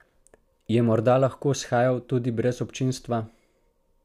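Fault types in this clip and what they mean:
No technical fault can be heard in the recording; nothing interrupts or alters the speech signal.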